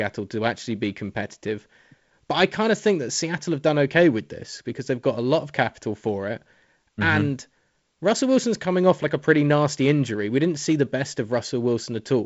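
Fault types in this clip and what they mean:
No faults can be heard anywhere in this recording.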